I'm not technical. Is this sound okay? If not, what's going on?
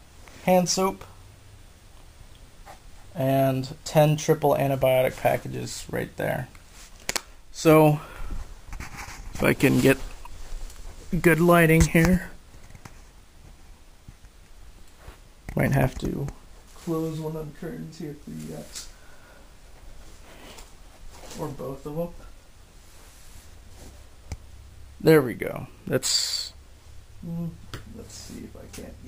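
No, not quite. All the way through, there's a thin, bright, metallic fizz riding on top of the sound, and it gets louder and quieter along with the sound itself. That's imaging from sample-and-hold upsampling. The audio was converted to a higher quality setting by simply repeating each point instead of smoothing between them, which fits a jump from 24 kHz to 48 kHz. That leaves a mirrored, back-to-front copy of the sound up in the very high treble, roughly between 12 and 24 kHz.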